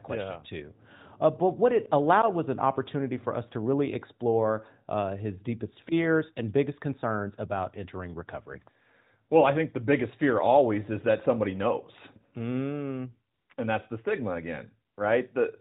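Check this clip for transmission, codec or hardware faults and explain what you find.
One fault appears: AMR comfort noise, heard three times near the end of the speech. At 13.34 to 13.50 s, 13.54 to 13.58 s and 14.94 to 14.98 s, the phone judged the talker silent and stopped sending speech frames, for gaps of 160, 40 and 40 ms. The receiver filled each gap with synthetic noise built from a rough level and spectrum estimate, so the real background briefly switches to a smooth, steady hiss. All of this sits within band-limited AMR narrowband audio, which fits the 12.2 kbps mode.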